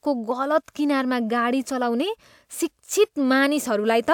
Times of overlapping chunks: none

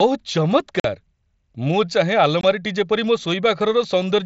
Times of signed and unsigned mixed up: none

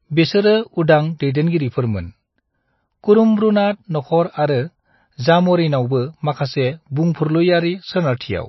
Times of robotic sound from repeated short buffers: none

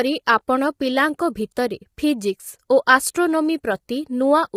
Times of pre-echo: 2.86

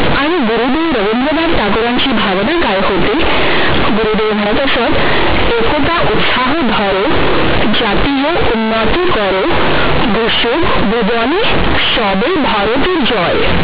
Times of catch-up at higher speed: none

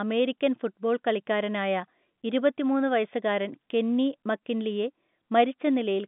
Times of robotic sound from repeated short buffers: none

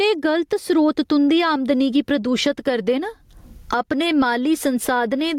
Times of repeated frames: none

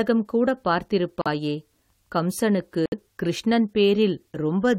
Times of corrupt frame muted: 1.21-1.27, 2.86-2.94

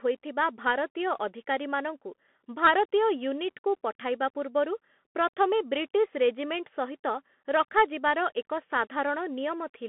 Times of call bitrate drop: none

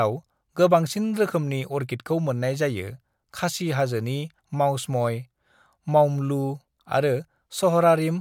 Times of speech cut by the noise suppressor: none

